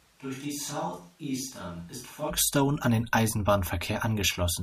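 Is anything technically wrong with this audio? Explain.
Yes. From the very start until 2.29 s, just before "an den", the speech has the sound of a switch to a distant microphone. The close microphone's signal was likely lost, leaving only one further away. The voice is roomy and hollow with thinner bass, about 10 dB quieter, over a noise bed roughly 30 dB below the speech. The waveform steps up sharply at 2.29 s, and the spectrogram shows weaker low frequencies and smeared, reverberant tails before that point.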